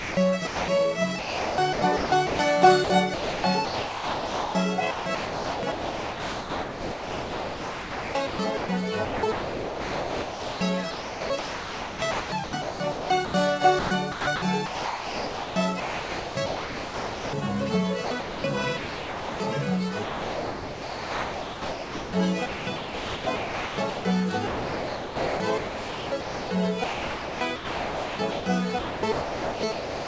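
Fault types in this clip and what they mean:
Sound chopped by the voice detector, 0.00–0.68, 1.19–17.33, 18.05–19.40 and 20.03–30.07 s: the audio repeatedly cuts out and a steady synthetic hiss takes its place, likely because the sender's voice detector kept stopping transmission and filling the gaps with comfort noise.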